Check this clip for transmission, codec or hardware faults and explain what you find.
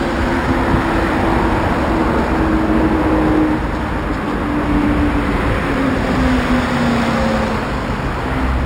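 One fault runs through the whole clip: imaging from linear upsampling. The top end sounds dulled, with a faint metallic shimmer on bright, hissy sounds. Straight-line interpolation between samples, which fits 12 kHz audio raised to 48 kHz, filters weakly, leaving mirror images from 6 to 12 kHz, roughly 30 dB below the signal.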